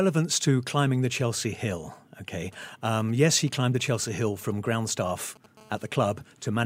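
From about 2.53 s to 5.46 s you get GSM signalling bursts: a 2G phone close by is handshaking with its network, and the audio circuitry rectifies those short radio bursts into a galloping dit-dit-dit of brief 217 Hz buzzes, sitting roughly 25 dB under the speech.

Then from 5.57 s to 6.61 s it settles into a steady GSM phone buzz, the phone now on a call and transmitting continuously at 217 bursts per second. That comes through as a hard, raspy 217 Hz buzz full of harmonics, about 34 dB below the speech and unrelated to it.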